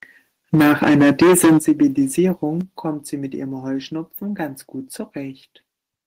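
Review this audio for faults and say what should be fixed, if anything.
From 0.53 to 1.86 s the speech turns harsh and crackly on its loudest syllables. The peaks are flattened at the converter's ceiling, by about 14 dB, on roughly a fifth of the samples. This is likely microphone overload from excessive input gain. Lower the microphone's input level so peaks stay well below full scale.

The level drops suddenly three times: by about 2 dB at 0.55 s, about 9 dB at 1.59 s, and about 6 dB at 2.61 s. Voice and background fall together. This is likely the call software stepping the microphone volume down after detecting clipping. Setting a proper input level beforehand removes the need for these corrections.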